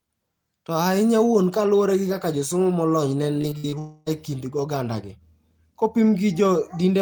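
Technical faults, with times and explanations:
3.41–3.75 s, repeated packet loss (robotic sound): right after "kaka josomo molony ne", four short holes (the longest 60 ms) are patched by repeating the preceding sound, so about 39% of the span is filled in and it turns choppy. A spectrogram shows smeared, repeated harmonic blocks with abrupt edges.
3.79–4.08 s, long network dropout: the speech gives way to about 274 ms of fading, stretched continuation, likely because audio stopped arriving and the receiver extended the last sound. It resumes at "e kind ogandagi", missing that stretch. The waveform shows a smooth, repetitive decaying envelope instead of speech.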